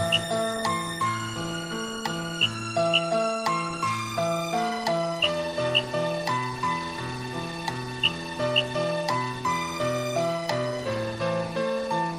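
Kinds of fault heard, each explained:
No kinds of fault are heard, so there are none to explain.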